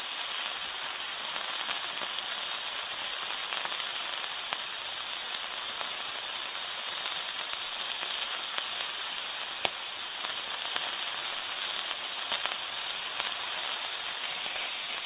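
No technical faults are audible.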